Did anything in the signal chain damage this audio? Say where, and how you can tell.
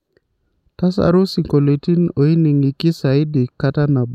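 No, nothing in the signal chain has damaged this speech recording. Careful listening turns up no event at any stage that would point to trouble in how the audio was captured, carried or reproduced.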